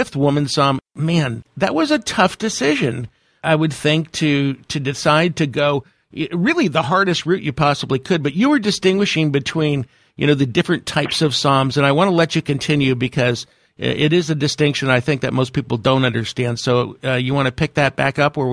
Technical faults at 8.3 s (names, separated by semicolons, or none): none